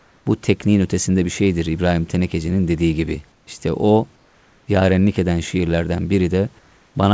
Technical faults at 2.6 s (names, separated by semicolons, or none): none